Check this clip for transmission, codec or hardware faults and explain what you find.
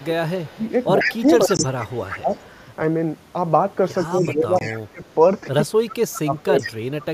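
Three kinds of fault are present: speech suppressed in double talk, echo leak, and a gap between chunks.

Speech suppressed in double talk occurs from 0.0 to 2.33 s, 4.09 to 5.03 s, and 5.64 to 6.67 s. The level drops by about 20 dB in the first two spans and about 25 dB in the third, over roughly 1.5 s, 0.7 s and 0.5 s in total. The likely cause is an echo canceller that heard both sides at once and turned the local talker down along with the loudspeaker echo. On a waveform the envelope sags or breaks into pieces. A spectrogram shows the energy thinning out, especially the upper bands.

An echo leak runs from 0.0 to 2.48 s, 3.97 to 4.74 s, and 5.9 to 7.05 s. A copy of the voice returns 136 ms late, about 5 dB, 20 dB and 15 dB below the direct speech in those three spans. The copy is probably loudspeaker sound that the far end's canceller failed to remove and sent back. A spectrogram shows each syllable's harmonic pattern repeated 136 ms later as a fainter ghost. 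The waveform looks smeared rather than cleanly separated between syllables.

A gap between chunks appears at 1.57 s and 4.59 s as a 20 ms hole. The two gaps are 3.0 s apart, which points to the audio being handled in 3 s chunks, with padding or a late start leaving silence at each join. Nothing is lost, but the sound stops briefly. On a waveform each gap is a short flat notch. On a spectrogram it is a thin vertical blank stripe across all frequencies.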